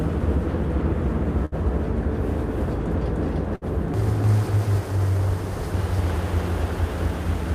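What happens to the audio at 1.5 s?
A burst of packet loss runs from 1.45 to 1.55 s. Packets arrived too late or not at all, so the receiver stretched the last sound for about 60 ms while fading it down. Playback then jumps ahead, skipping roughly 60 ms of audio.

A doubled audio track also sounds here and throughout: a full-band copy trails the original by about 300 ms at roughly equal level, with no decay or room colour. It likely comes from the audio being captured a second time by a slower path.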